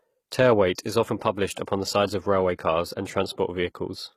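Throughout, the speech was likely coded with HE-AAC compression at a rate that fits about 20 kbps. Its copied-up treble sounds plainly gritty and metallic, with lispy s sounds. At 1.66 s, just before "the sides of railway", a pre-echo occurs. Codec noise spread across the block leaks about 17 ms ahead of the attack, heard as a brief hiss that smears its onset.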